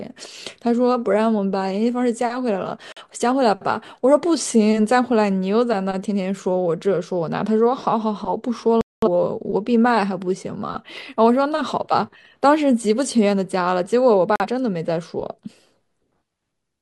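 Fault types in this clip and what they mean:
Digital broadcast dropout: The receiver stopped getting usable digital frames and muted until clean ones arrived. The speech simply cuts out, then resumes further on. Whatever was sent during the gap is gone. It happens three times here. Short holes near 2.92 s and 14.36 s last about a tenth of a second each, which fits a single lost frame. A longer hole from 8.81 to 9.08 s points to about five frames missing.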